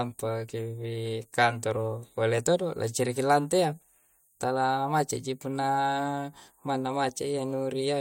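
Nothing technically wrong turns up anywhere in this speech recording, so there's no fault to point to here.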